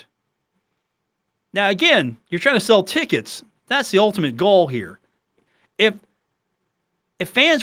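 No technical faults are audible in this recording.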